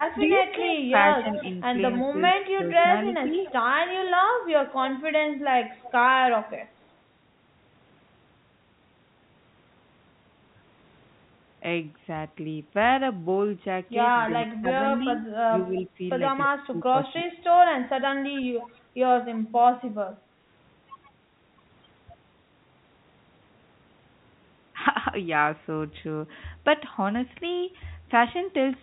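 From 0.29 to 3.53 s a delayed copy of the speech trails the talker by about 280 ms, some 10 dB down. This is an echo leak, likely the far end's loudspeaker sound reaching its microphone and slipping past the echo canceller. Inside that span, at 0.35–0.93 s and 2.11–3.33 s, the talker briefly dips by up to about 10 dB and then about 5 dB. This is speech suppressed in double talk: the canceller likely could not separate the near talker from the echo and attenuated both. The echo returns at 4.85–5.92 s, about 15 dB down at a 282 ms delay. From 14.46 to 17.44 s the speech is cut more heavily, with about a second in total pulled down by as much as 20 dB. A last short echo scrap at 18.34 s, about 20 dB down at 289 ms, is followed by a dip of about 15 dB at 18.43–18.68 s. All of this sits in the narrow telephone band of the G.711 call path, with nothing above 4 kHz.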